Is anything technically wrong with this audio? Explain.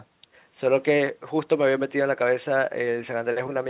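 No, nothing's technically wrong here; it's just speech carried over a phone-style call line, so there's nothing above 4 kHz and it has that narrowband telephone character you'd expect from a call codec like G.711.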